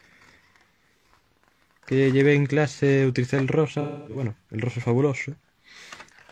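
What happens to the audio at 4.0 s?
From 3.80 to 4.21 s there is AAC frame loss with concealment: almost 0.3 s of coded frames goes missing, and the decoder fills the gap by reworking the last good spectrum. Unlike a hard dropout, there is no abrupt cut. The sound smears into a blurred, noisy continuation instead.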